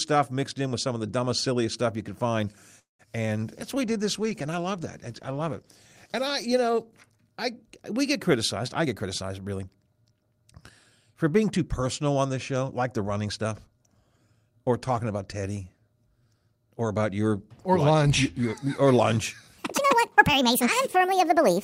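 Speech, with four faults. At 2.79 s, just after "stuff you could find", a call audio freeze opens a gap of about 0.2 s. The last sound trails off, then about 150 ms is silent. The speech resumes where it stopped, with nothing lost. Delayed packets likely drained the jitter buffer. From 3.55 to 7.27 s there is a call bitrate drop. The encoder falls from 40 to 18 kbps and stays at the lowest rate for 2.66 s. The speech turns coarse and muffled as high frequencies are cut. It recovers before "I we get criticized". Right after those words, from 8.79 to 10.04 s, a jitter buffer speed-up plays the speech at 115% speed with unchanged pitch. Short pitch-period pieces are removed again and again to shed excess delay, about 0.2 s in all. The talk sounds hurried. From 19.58 s to the end, a section at the wrong speed plays 1.68 times too fast. Pitch rises by roughly ten semitones along with the speed, so the voice turns high and rushed. 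The section was likely played against the wrong clock.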